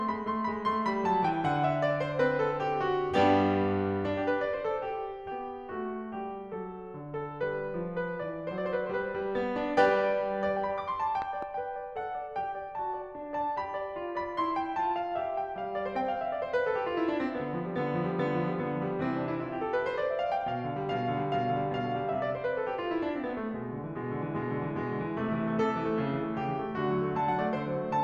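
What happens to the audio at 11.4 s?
At 11.22 s a loud pop cuts through the music, and a second follows before it ends at 11.45 s. The two sharp hits stand well above the level of the music. The music keeps playing underneath without a break. The likely cause is a sudden voltage jump, from a plug, a switch, static or a driver glitch, added to the signal. The circuits downstream shape each jump into a brief thump.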